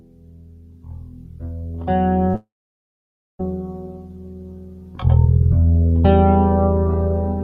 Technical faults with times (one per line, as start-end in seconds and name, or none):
0.00-7.43 noise suppressor applied to music or sounds
0.00-1.43 sound cut by the noise suppressor
2.29-2.36 short concealed packet loss
2.36-3.41 long network dropout
3.71-5.03 sound cut by the noise suppressor